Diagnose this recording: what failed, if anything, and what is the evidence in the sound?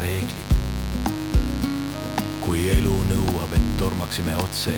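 A grounding or shielding fault in the analogue wiring admitted 50 Hz mains interference, producing a steady raspy mains buzz throughout, only around 10 dB below the signal.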